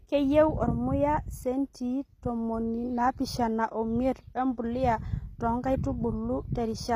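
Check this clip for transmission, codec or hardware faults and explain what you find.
The speech carries a codec fault that runs through the whole clip: HE-AAC compression. The treble has a synthetic, gritty character, and s sounds come across lispy and metallic, with nothing above about 15.5 kHz. This is likely HE-AAC v2 at a low rate, which fits a bitrate near 24 kbps. Only the lower band is coded properly; the upper band is regenerated by copying lower content upward under a coarse envelope, so its harmonics fail to align with the real spectrum.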